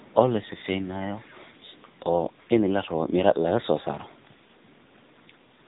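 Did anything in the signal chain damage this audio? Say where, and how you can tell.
Yes, at the codec stage: AMR narrowband mobile codec damage throughout, with plainly buzzy, synthetic speech that fits a low-rate mode near 8 kbps. The spectrogram shows a flat ceiling at 3.8 kHz, because an 8 kHz mobile codec passes nothing above 4 kHz; it rebuilds speech from a vocal-tract model and sparse pulses.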